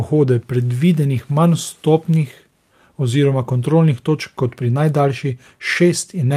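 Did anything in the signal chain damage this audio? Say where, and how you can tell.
No, nothing along the chain, from capture through to playback, has left any audible damage on this speech.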